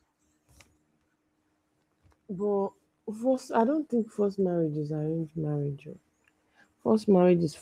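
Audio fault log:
The speech carries the light imprint of Opus voice compression in its hybrid fullband mode, with the full audio band kept intact and only the mild coding texture expected at a rate of about 24 kbps, and nothing else in the signal departs from normal.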